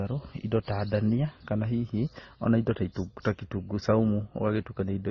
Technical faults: transcoding between lossy codecs

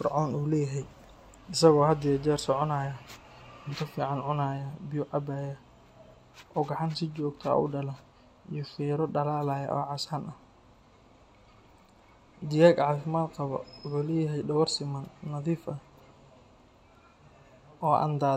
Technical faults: none

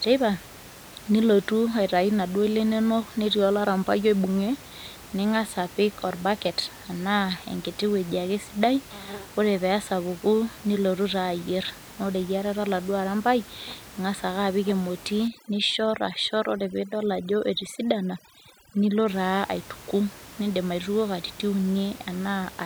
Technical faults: overdone noise removal

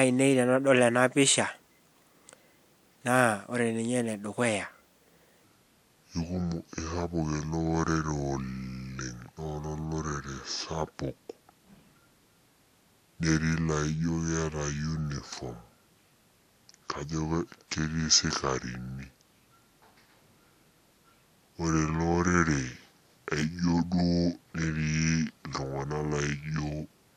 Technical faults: section at the wrong speed

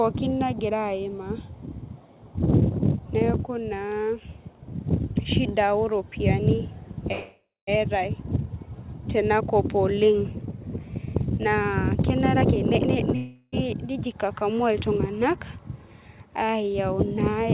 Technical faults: call audio freeze; jitter buffer speed-up

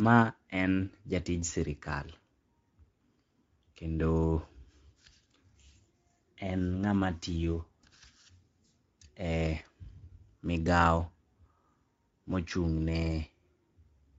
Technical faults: Speex codec

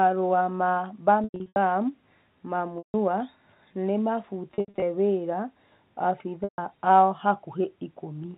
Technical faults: packet loss with pitch repetition

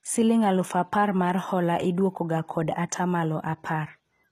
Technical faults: HE-AAC compression

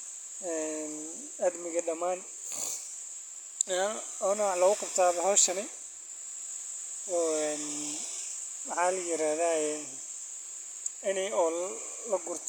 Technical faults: none

